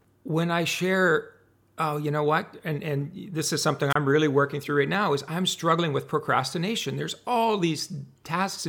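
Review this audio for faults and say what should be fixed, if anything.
At 3.90 to 3.96 s there is a wireless microphone squelch dropout. Hiss swells as the radio signal fades, then the receiver's squelch cuts the output to near silence for about 29 ms before the speech returns. A digital packet-loss gap would start abruptly with no noise before it. Here the rising hiss before the hole shows a weak analogue FM link. To prevent it, keep line of sight and short range between transmitter and receiver, and use diversity antennas.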